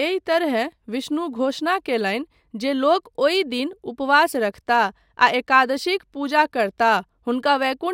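Throughout the speech, imaging from linear upsampling dulls the top end and leaves a faint mirrored band from 12 to 24 kHz, roughly 35 dB down, which fits a crude 24 kHz to 48 kHz conversion.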